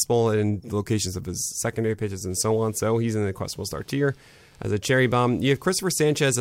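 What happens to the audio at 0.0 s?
Nothing goes wrong at 0.0 s; the audio is intact at that moment.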